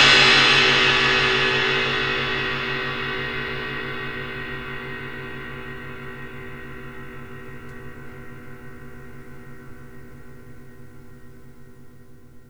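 Nothing goes wrong anywhere in this one; there's simply no fault to point to.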